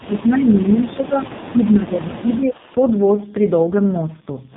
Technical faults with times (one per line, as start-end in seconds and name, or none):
0.00-4.57 AMR narrowband mobile codec
0.00-0.07 echo leak
0.07-2.58 speech suppressed in double talk
1.39-1.50 echo leak